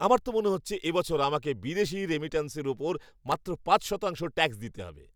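At 3.05 to 3.36 s, after "আমাকে বিদেশী রেমিটান্সের উপর", processor overload crackle appears. About seven tiny buffers, around 1.5 ms each, drop to silence, causing gritty tearing.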